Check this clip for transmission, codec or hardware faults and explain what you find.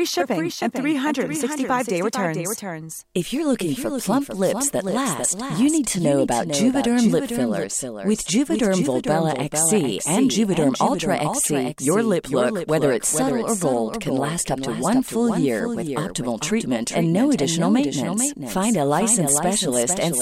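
One fault is present: a doubled audio track running throughout the clip. The speech is likely being captured twice, once by a slower path that lags the main one, so a second full-band copy arrives around 400 ms behind at roughly 5 dB lower. Each phrase is followed by a dry, slightly quieter repeat with no decay or room colour, so syllables from the copy pile onto the next ones and the speech sounds cluttered rather than reverberant.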